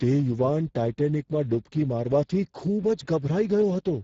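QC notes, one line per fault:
throughout, Speex codec: the speech has passed through the Speex CELP codec at a low setting, with the roughness pointing to a bitrate near 10 kbps. So few bits are left for the excitation that the voice comes out noisy and hoarse, the damage plainly audible. Content stops at about 7.7 kHz, and the upper band below that edge is a shaped, noise-like fill, not real speech detail, which adds a hissy, synthetic top.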